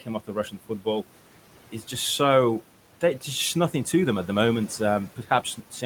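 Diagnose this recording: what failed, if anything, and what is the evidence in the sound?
Noise suppressor artifacts throughout: call processing pulls steady background down by about 12 dB frame by frame, leaving residual noise that pumps between phrases and rises under the speech.

Speech cut by the noise suppressor, 0.00–0.86 s and 5.16–5.82 s: quiet speech was treated as noise and dipped by up to about 11 dB and about 9 dB, roughly a fifth and a tenth of a second in all.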